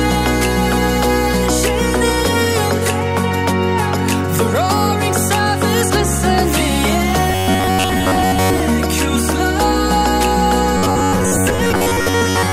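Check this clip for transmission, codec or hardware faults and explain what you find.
Robotic sound from repeated short buffers occurs from 7.30 to 8.60 s and from 10.78 s to the end. A rigid 93.8 Hz metallic buzz, likely from about 10.7 ms chunks replayed most of the time, follows the sound's rhythm, unlike a constant hum.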